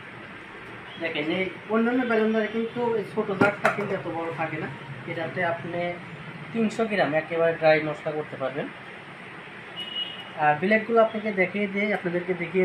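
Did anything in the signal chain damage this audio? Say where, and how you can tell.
No, no signal-chain damage audible.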